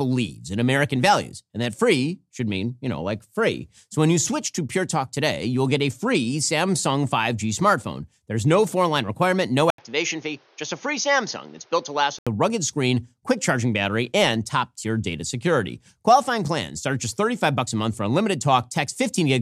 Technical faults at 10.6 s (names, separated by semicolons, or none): input switched to a poorer device